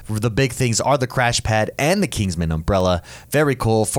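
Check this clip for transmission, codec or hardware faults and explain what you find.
One fault is present: word clock ticks from 0.30 s to 3.92 s. The receiving device runs on its own clock, unlocked from the sender, and slips a single sample roughly every 0.3 s, a drift near 70 ppm. About fifteen sharp, evenly spaced ticks sit over the speech.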